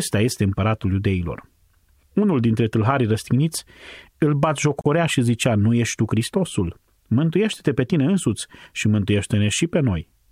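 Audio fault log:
4.81–4.86 s: gap at a join of encoded pieces, a 44 ms silence from untrimmed encoder padding; unlike a dropout, the speech resumes exactly where it stopped.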